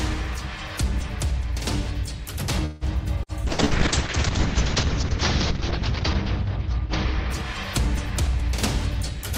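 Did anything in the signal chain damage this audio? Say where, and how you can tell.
Yes. At the network stage there is a call audio freeze from 2.65 to 2.84 s: the last sound is stretched into a fading buzz or hiss for about 157 ms, then the audio resumes exactly where it stopped. That points to a delay that likely drained the jitter buffer, not to loss.

Also at the network stage, a burst of packet loss occurs three times: 3.23 to 3.45 s, 3.52 to 3.62 s and 3.65 to 3.74 s. Each has a short concealed fill, a held buzz or fading hiss, after which about 60 ms of audio is simply skipped. Unlike the freeze, the audio jumps ahead.

At the codec stage there is a call bitrate drop from 3.49 to 9.35 s. The encoder falls from 96 to 6 kbps and stays at its lowest for about 2.3 s, turning the sound rough and watery. The bandwidth also shrinks from 20 kHz to 8 kHz, which takes off the top end. This is a sustained change in tone quality rather than a gap.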